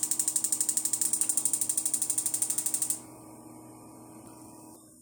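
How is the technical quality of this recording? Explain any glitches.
The recording has three brief glitches, at 1.03 s, 4.26 s and 4.75 s, all from damaged data in a compressed stream. Corrupted bytes make the decoder misread frames and lose sync, producing short disruptions that show as thin vertical streaks on a spectrogram.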